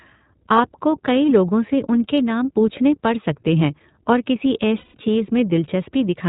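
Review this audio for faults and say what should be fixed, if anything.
The iLBC codec shapes the whole speech clip. Nothing above 4 kHz comes through, so the sound is narrowband and dull. Each frame's excitation is coded on its own, which leaves the voice clear but rough and somewhat synthetic. The damage is plainly audible. The texture fits the 20 ms frame mode, which points to roughly 15.2 kbps. To prevent this, use a wideband codec such as Opus at a higher bitrate.

Lost iLBC frames cause a gap from 4.78 to 4.97 s, right after "सकते हैं और किसी". For about 160 ms the decoder repeats the last pitch cycle mixed with noise. It fades as the loss goes on, and it sounds like a held, slightly buzzy vowel. The length fits about eight lost 20 ms frames. The voice recovers almost at once, since each frame stands alone. To prevent this, add jitter buffering and forward error correction on the network path.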